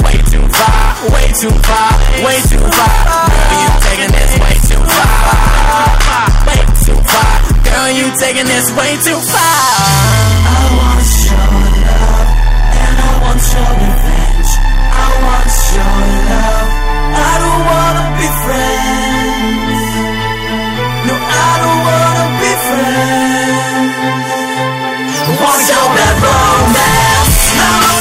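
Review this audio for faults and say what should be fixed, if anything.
Hard clipping runs through the whole recording: every loud moment carries a gritty fuzz rather than clean peaks. The signal was driven about 10 dB beyond what some stage in the chain could pass, so its peaks were sliced flat, and a large share of the waveform, roughly a third of it, sits above that ceiling. Those flattened tops add harmonics high up the spectrum, which is the fizz heard on loud passages. Set input and processing gain so the loudest sounds stay comfortably below the converter's or format's limit, and add a limiter ahead of any stage that could overload.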